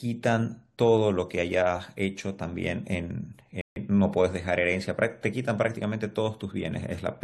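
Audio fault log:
3.61–3.76 s, rebuffering stall: the speech halts into silence for about 150 ms, then picks up exactly where it stopped, because playback ran out of downloaded audio and waited for more. Unlike a dropout, no speech goes missing; the pause simply adds time.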